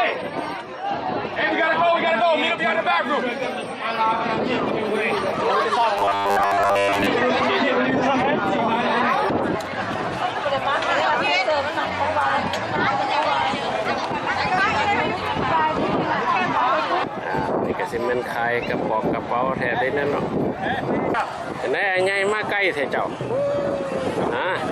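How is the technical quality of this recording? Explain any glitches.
One glitch stands out. From 5.98 to 7.07 s the sound turns into a rigid, metallic buzz at 100 Hz: robotic sound from repeated short buffers, likely from a 10 ms chunk looping while most of the real audio is skipped.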